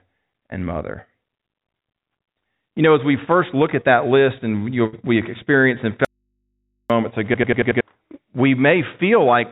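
At 4.86 s there's a burst of packet loss: about 65 ms of the last sound is stretched and fading, then roughly 60 ms is skipped before "we experienced and".

Right after "we experienced and", from 6.05 to 6.90 s, there's an audio dropout to a faint residue. The sound cuts out abruptly for about 850 ms, leaving only mains hum around 55 dB down, likely from a live but disconnected input.

Then from 7.34 to 7.81 s comes a system hang loop. One 93 ms chunk repeats five times, a stutter at about 10.8 Hz that fits a 4096-sample buffer, while roughly half a second of audio is lost. Throughout, the call path's narrowband codec leaves nothing above 4 kHz.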